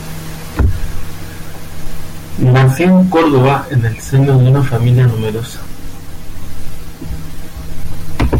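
No audible technical faults.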